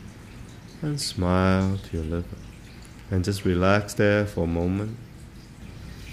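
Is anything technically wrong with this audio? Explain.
Yes. At 3.82 s a corrupt frame was decoded: a single compressed frame arrived with flipped bits and the decoder played it anyway, misplacing energy across frequencies. The result is a brief, fairly quiet chirp or blip lasting about one frame.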